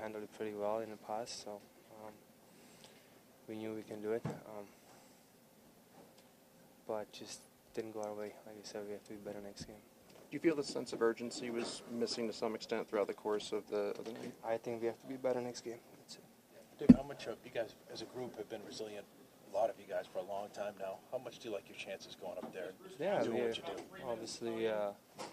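No technical faults are audible.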